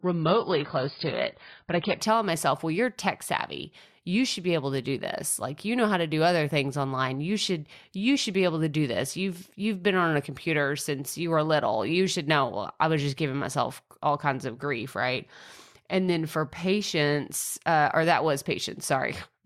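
For the first 2.0 s the speech is dull, with nothing above 5.1 kHz, and carries codec smearing typical of an adaptive stream starting at a low bitrate. It jumps to full clarity before "telling myself well you're" without any gap, unlike a dropout or rebuffer.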